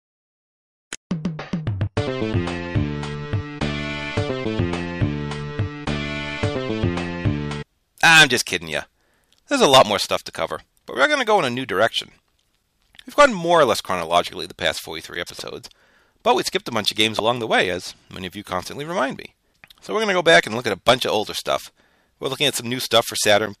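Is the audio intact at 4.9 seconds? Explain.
Yes, at 4.9 seconds the audio is intact, with no dropout, click, distortion or other fault at that point.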